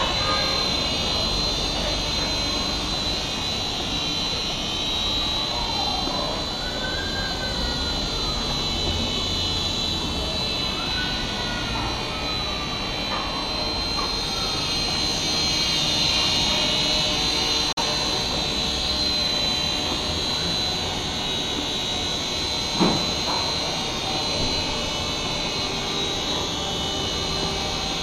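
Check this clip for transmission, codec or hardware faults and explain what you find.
One fault is present: a digital broadcast dropout from 17.72 to 17.82 s. The receiver stopped getting valid frames and muted its output until good ones arrived. The sound fades out over about 8 ms, goes silent, then resumes further along in the programme. The 42.7 ms of missing audio fits a single lost frame. A waveform shows a short flat gap with a brief taper at its start, and a spectrogram shows a narrow vertical band of silence across all frequencies.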